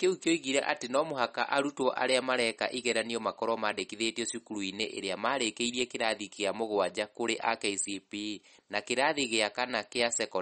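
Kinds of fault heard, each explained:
MP3 compression: The encoder was likely starved of bits, so it discarded the treble and let weak frequency lines drop in and out between frames. The speech has nothing above 8.4 kHz and a plainly audible watery, swirling texture, which fits a bitrate near 40 kbps.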